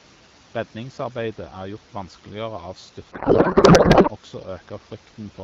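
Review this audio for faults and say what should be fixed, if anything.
Codec payload misread from 3.11 to 4.11 s. Garbled noise and warble replace the speech. Octet-aligned AMR frames are decoded as bandwidth-efficient, so every field lands misplaced. Fix it by having both ends agree the AMR payload format during call setup.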